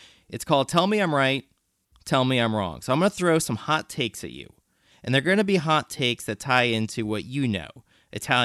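Nothing in this speech recording points to a technical fault: the signal holds steady from beginning to end without any audible disruption.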